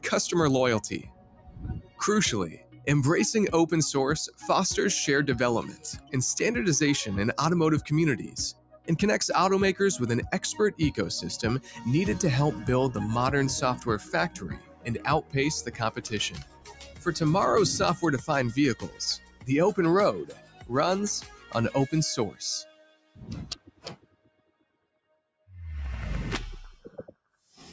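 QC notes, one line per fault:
throughout: noise suppressor applied to music or sounds. A speech-tuned suppressor stays active, treating steady tones and tails as noise. The level swings by roughly 15 dB, so the sound pumps.
0.0–2.87, 4.28–4.45, 5.63–6.14, 7.83–8.89, 10.72–11.85, 13.77–17.08, 18.19–25.48, 26.76–27.6 s: sound cut by the noise suppressor. Held and decaying parts sink by about 13 to 17 dB, while attacks pass. The longest stretch is 18.19–25.48 s, with around 4 s pulled down.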